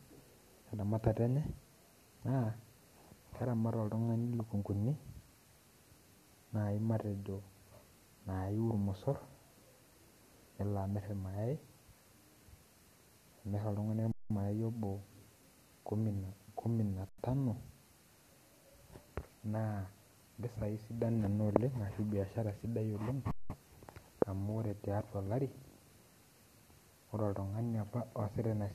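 Underrun with held sample at 14.12 to 14.30 s, 17.09 to 17.18 s and 23.31 to 23.50 s. Each time, the output buffer ran dry and the converter froze on its last value, so the waveform goes flat and the speech simply stops for about 186 ms, 93 ms and 186 ms. The lengths point to refills of 8192 and 4096 samples. Little or no speech seems lost, so each resumes where it paused, with only a soft join.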